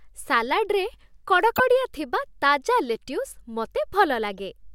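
Corrupt frame decoded at 1.56–1.60 s, 2.95 s and 4.38 s: damaged compressed frames were played anyway, misplacing energy into brief glitches, loud first, faint second, moderate third.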